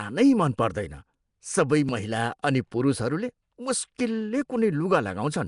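From start to end, the speech has a rough, hissy halo and a smeared, underwater quality. Nothing reaches above about 10.6 kHz. The likely cause is Nellymoser compression at a bitrate of around 44 kbps. Weak bands get no bits and are filled with noise.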